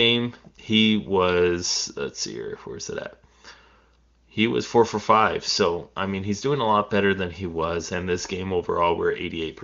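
No technical faults can be heard anywhere in the speech. It has passed through the AMR wideband (HD Voice) codec, and any coding damage is faint at most, which fits one of its higher rates, around 24 kbit/s.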